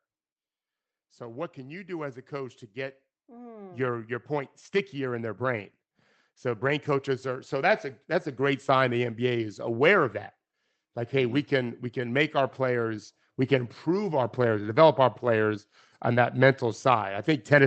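From 1.18 to 5.71 s the speech and the room noise behind it swell together by about 8 dB. This is automatic gain rising: the gain control judged the input too quiet and lifted its gain slowly. A second rise of about 6 dB follows from 6.41 to 9.64 s, ending just before "of that". On a waveform the envelope of speech and noise floor widens as a steady ramp. A spectrogram shows every band brightening evenly, capped near 8 kHz by the call codec.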